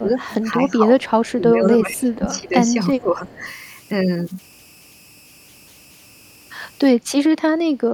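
A faint, steady whistle near 3 kHz, about 29 dB below the speech, sits under the whole clip and grains the quieter stretches. These are converter idle tones: an undithered delta-sigma converter settles into repeating bit patterns on low-level input, and those patterns sound as a pitched tone.

From the start to 3.44 s the speech repeatedly dips, by roughly 15 dB at its deepest, and thins in patches adding up to about three seconds. This is likely speech suppressed in double talk: with both ends talking, the echo canceller couldn't separate the near talker from the loudspeaker echo and turned everything down.

Over the same opening, a quiet copy of the speech trails it by 373 ms, at 0.29 to 0.51 s (about 25 dB down), 1.01 to 1.11 s and 2.98 to 3.54 s (both about 30 dB down). That is echo leak, likely from a loudspeaker whose canceller let part of its own pickup through and sent it back.

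From 7.7 s to the end, the room sound under the speech drops by about 10 dB for roughly 0.2 s. This is background gated by the echo canceller: it clamped the microphone hard while the loudspeaker was active, briefly cutting the ambience.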